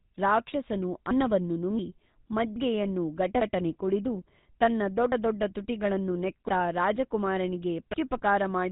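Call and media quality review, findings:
GSM full-rate codec, entire clip: buzzy, gravelly speech, nothing above 3.8 kHz. Spectrogram shows hard ceiling there and smeared harmonics. Coarse pulse-driven excitation, consistent with 13 kbps.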